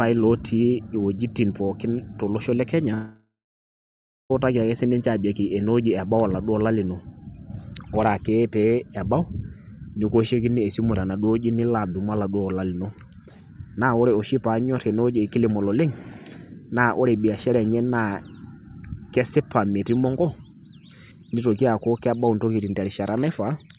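In this speech recording, right after "pooki tolosho le" at 2.94 s, the last sound smears into a fading buzz, then gives way to about a second of silence before speech resumes at 4.32 s with "ake sii ninche", about 1.36 s of audio missing. This is likely a long network dropout, with the receiver concealing briefly before falling silent. The whole clip has the narrow, telephone-like sound of G.711 mu-law with nothing above 4 kHz.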